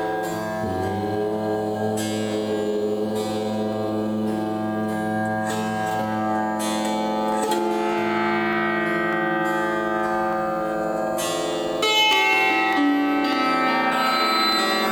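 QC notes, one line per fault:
0.12–14.53 s, clock drift buffer slips: a click recurs every 0.6 s, about thirty times, likely because two clocks differ by a few hundred ppm and a handful of samples is dropped or repeated. The waveform shows step discontinuities, and the spectrogram shows evenly spaced, thin broadband vertical lines.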